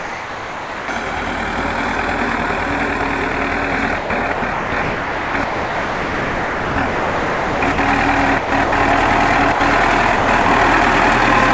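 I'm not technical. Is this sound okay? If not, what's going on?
No. Sound dropped by the voice detector, at 0 to 0.88 s, 3.32 s and 9.52 to 9.6 s: the sound gives way to steady filler hiss, likely because the sender's detector mistook it for background and stopped sending. Sound chopped by the voice detector, at 3.98 to 7.78 s, 8.38 to 8.72 s and 10.16 to 10.46 s: the sound turns choppy as the detector likely kept switching on and off, patching the gaps with filler noise.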